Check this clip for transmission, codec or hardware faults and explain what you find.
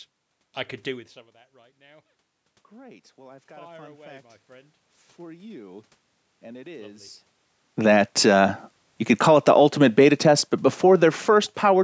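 The faults are in the call's automatic gain control, not in the transmission path or codec. It reacts to level changes after the talker moves around 1 s and again around 7.5 s.

Automatic gain rising, 2.69 to 7.17 s: after the voice drops by about 24 dB at the microphone, the AGC judges the input too quiet and raises its gain by about 8 dB over those 4.5 seconds. Voice and room noise swell together, recovering only part of the lost level.

Automatic gain falling, 9.27 to 11.79 s: the AGC lowers its gain by about 3 dB over roughly 2.5 seconds, responding to input it judges too loud or to background noise too strong for its current gain. Voice and room noise sink in level together.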